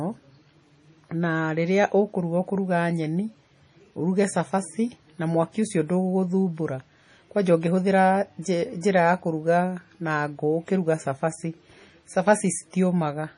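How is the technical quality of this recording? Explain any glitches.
The recording is heavily degraded for its whole length. The speech sounds watery and swirly, with a dull top end where nothing reaches above about 10.6 kHz. This is likely MP3 compression, and the damage fits a low bitrate around 32 kbps. Starved of bits, the encoder cuts the treble at a fixed point and drops weaker frequency lines, which flicker in and out between frames. That produces the swirling texture, metallic chirps on s sounds, and smeared consonant attacks.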